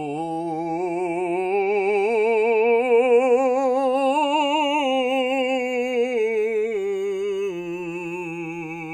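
Throughout the music, the channels are drifting apart: separate clocks about 100 ppm apart slide the delay to under a millisecond, sweeping comb notches into slow flanging.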